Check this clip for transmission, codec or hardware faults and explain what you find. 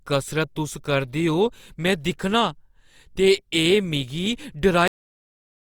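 One fault is present: a cut-off end. At 4.88 s the speech stops mid-sound and falls straight to digital silence for the remaining 0.89 s, because the final buffers were never written or played. Unlike a dropout, nothing resumes afterwards, and unlike a fade, there is no decay.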